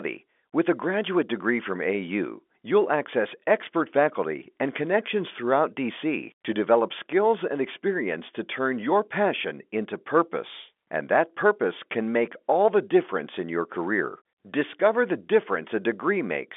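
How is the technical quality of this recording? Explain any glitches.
No glitches can be heard.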